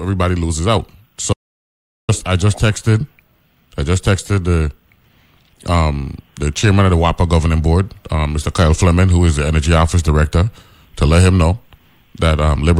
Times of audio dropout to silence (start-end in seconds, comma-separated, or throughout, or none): 1.33-2.09